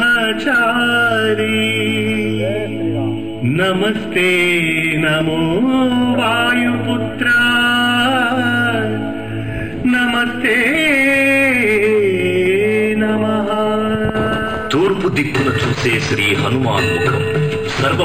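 Imaging from linear upsampling runs throughout: the dulled top and faint metallic shimmer, with mirror images roughly 25 dB down, point to straight-line interpolation from 11 kHz to 48 kHz.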